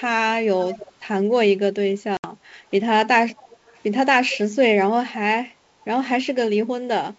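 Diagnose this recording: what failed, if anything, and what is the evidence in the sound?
Echo leak, in call processing. A copy of the speech, about 15 to 30 dB below it, returns about 305 ms late at 0.61–0.92 s, 3.37–3.8 s and 4.3–4.37 s. It is likely loudspeaker sound slipping past the echo canceller.

Packet loss on an ADPCM call, in the network. A hard-edged 70 ms hole sits at 2.17–2.32 s, which fits about seven lost packets. Speech resumes slightly distorted while the ADPCM decoder resynchronises.

Background gated by the echo canceller, in call processing. At 5.6–5.84 s the room sound dips by up to about 6 dB for roughly 200 ms. The canceller pulled the microphone down while the loudspeaker played.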